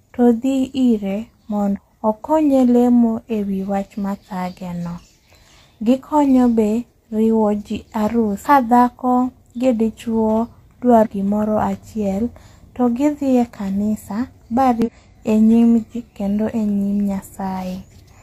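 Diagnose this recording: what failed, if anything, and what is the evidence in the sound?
Damaged data in a compressed stream, at the codec stage: short bursts at 1.72–1.79 s (between "to dhi ire" and "okonye lemo ewi wach"), 8.41–8.46 s, 11.01–11.07 s, 14.82–14.89 s and 15.93–15.96 s, each lasting roughly 30 to 70 ms. Corrupted bytes in the encoded speech make the decoder misread those frames and lose sync until it finds the next valid frame header, so each spot is heard as a brief chirp or blip.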